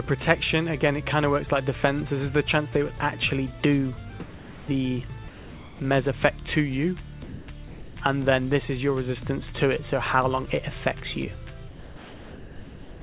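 At 4.2–4.68 s, 5.28–5.8 s, 7.24–7.48 s, 7.68–7.96 s and from 11.68 s to the end, the sound gives way to steady, featureless hiss and then returns, except in the last, which runs out the clip. This is likely sound dropped by the voice detector, with comfort noise filling in. Unlike packet-loss gaps, the fill is smooth noise rather than clicks or smeared repeats, all within a band topping out at 4 kHz.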